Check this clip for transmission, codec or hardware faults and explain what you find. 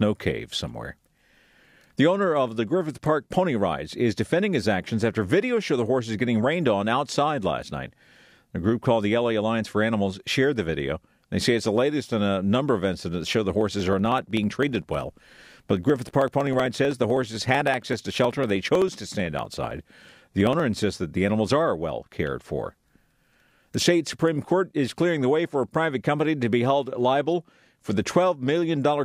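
One hardware fault is present: periodic USB or driver dropouts. From 13.61 s to 20.60 s, between "incidents that show the" and "insists that the animals", a steady ticking runs through the speech. A background task stalls the audio path every 63.5 ms. Each time, about half a millisecond of audio is skipped. Each of those jumps makes a small click, heard only while speech is sounding.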